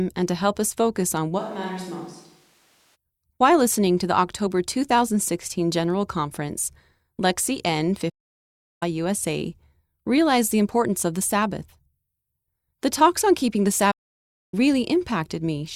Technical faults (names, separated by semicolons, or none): switch to a distant microphone; playback stall